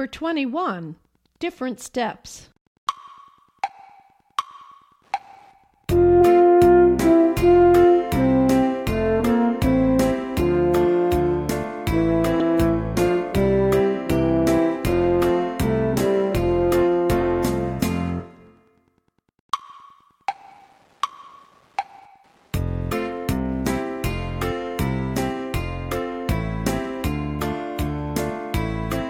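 A faint, steady ticking runs under the sound from start to finish, repeating about ten times a second. This is Wi-Fi interference: a nearby Wi-Fi radio's beacon, sent every 102.4 ms, is picked up and rectified by the audio circuit, leaving a quiet tick well below the programme level.

Brief glitches break through at 1.86 s, 6.20 s and 12.40 s, each a tiny blip. These come from damaged data in a compressed stream: corrupted frames make the decoder lose sync and skip forward to the next valid frame header.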